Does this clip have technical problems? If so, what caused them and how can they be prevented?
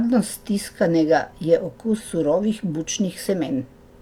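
Yes. A brief glitch breaks into the speech from 1.95 to 2.01 s. This is damaged data in a compressed stream: corrupted bytes made the decoder misread those frames and lose sync until it found the next frame header. Checksummed transfer and error-protected storage would prevent it.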